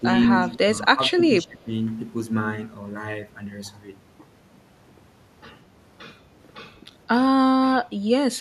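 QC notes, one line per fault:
0.00–0.06 s, speech suppressed in double talk: a brief shallow dip of a few dB at the onset, likely the echo canceller misreading overlapping far-end sound and turning the near-end signal down.
0.94–1.68 s, speech suppressed in double talk: the level drops by up to about 15 dB, for about half a second in total, during simultaneous talk.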